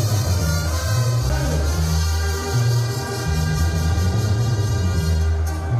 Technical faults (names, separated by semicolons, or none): CD skip